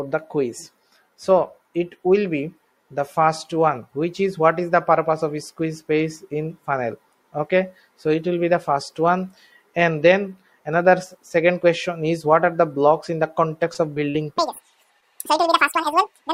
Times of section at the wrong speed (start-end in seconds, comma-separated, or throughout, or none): 14.38-16.33